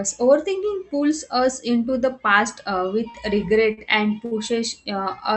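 Three short stalls from a late packet occur at 3.10–3.16 s, 3.73–3.79 s and 4.25–4.33 s. Each time the jitter buffer ran dry, so the receiver held the last sound for about 43, 41 and 60 ms until the packet arrived, then resumed with nothing lost. Each sounds like a brief drawn-out syllable with a slight buzz or dip. A spectrogram shows flat, smeared horizontal streaks there. The waveform shows a repeated, periodic-looking stretch.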